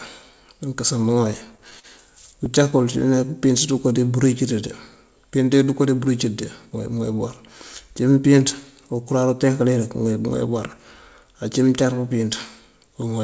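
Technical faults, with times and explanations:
0.98–1.86 s and 2.32–2.74 s, repeated stalls (stutter): Packets arrived late, so the jitter buffer kept running dry. The receiver stretched the last sound across seven short gaps, then four. The longest fill is 42 ms. Nothing is lost, but the speech hitches and drags.
2.76–3.89 s, jitter buffer slow-down: The buffer was low, so the receiver repeated single pitch periods over and over. This adds 69 ms and plays the speech at 95% speed. The pitch stays the same, so sounds come out slightly drawn out.
5.87–6.26 s, jitter buffer speed-up: Too much audio had piled up in the buffer. The receiver cut short pitch-period pieces, about 40 ms in all, to reduce the delay. The speech runs at 108% speed at unchanged pitch and sounds briefly hurried.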